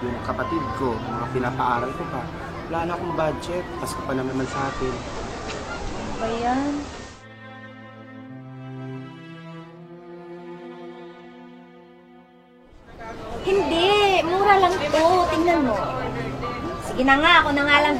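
At 4.21 s the sound cross-fades over 194 ms from digital to the FM analogue broadcast, a digital radio blending to analogue, returning at 7.26 s. Hiss rises to roughly 25 dB below the signal, and level shifts about 1 dB. Unlike a plain dropout, it fades smoothly both ways.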